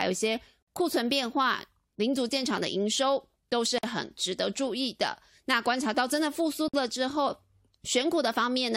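Three short dropouts cut into the speech at 0.63, 3.78 and 6.68 s, each about 50 ms, the last nearer 54 ms. Each is a gap at a join of encoded pieces: separately encoded chunks were butted together with their start delay and end padding left in, so the sound stops and resumes right where it left off.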